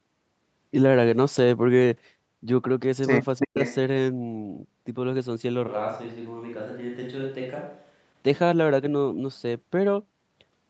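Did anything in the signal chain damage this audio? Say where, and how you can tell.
Yes. An echo leak sits at 3.36 to 3.75 s: a copy of the voice trailing by 333 ms, about 10 dB under the direct speech. That points to call processing, likely a loudspeaker endpoint whose echo canceller let part of its microphone pickup return.

Speech suppressed in double talk falls at 3.43 to 3.59 s, inside that echo. The talker's voice plunges by around 40 dB in pieces totalling roughly 150 ms. The echo canceller likely mistook the overlapping talk for echo and attenuated everything.

A switch to a distant microphone runs from 5.69 to 8.09 s. The voice turns abruptly roomy and hollow, drops by about 5 dB, and room noise rises to about 35 dB below speech. This suggests the close microphone's feed likely dropped out, leaving a farther pickup.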